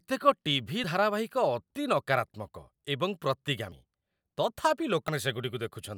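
At 0.84, 3.72 and 5.08 s the speech skips ahead with no silent gap, the last skip longer: likely a dropped buffer (overrun).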